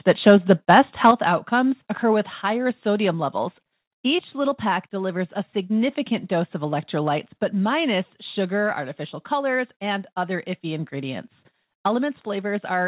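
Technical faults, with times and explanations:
0.28–0.30 s and 1.04–1.11 s, microphone overload: the input was likely set too high, driving peaks into the converter's ceiling, right at the limit in the first burst and about 2 dB past it in the second. A few percent of samples are flattened, giving loud syllables a harsh, crackling edge.
1.11 s and 2.13 s, microphone volume stepped down: call software likely reacted to the clipped peak by cutting the device's input gain, first by about 7 dB straight after the second overload, then by about 2 dB more. Sound and background drop abruptly each time, heard through the call path's band limit at 4 kHz.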